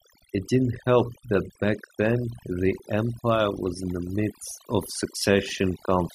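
Overdone noise removal runs through the whole speech clip. A noise reduction stage was set too strong. It cuts individual frequency bands whenever they sit near its noise estimate. Quiet parts of the voice vanish with them. In the pauses the background drops and breaks up into twinkling, warbling specks.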